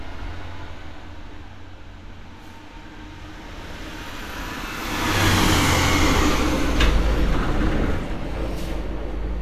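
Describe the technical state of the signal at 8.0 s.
At 8.0 s, as throughout the clip, the likely cause is low-rate Vorbis compression, consistent with a bitrate around 35 kbps. Nothing reaches above 14.2 kHz, and the coarsely quantised treble has turned to hiss, leaving textures grainy and attacks smeared.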